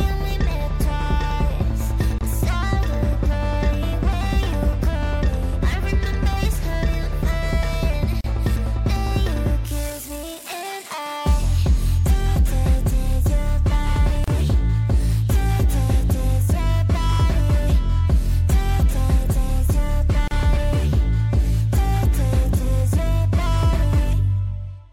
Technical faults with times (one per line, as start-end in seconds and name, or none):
2.18-2.21 gap at a join of encoded pieces
8.21-8.24 gap at a join of encoded pieces
14.24-14.28 gap at a join of encoded pieces
20.28-20.31 gap at a join of encoded pieces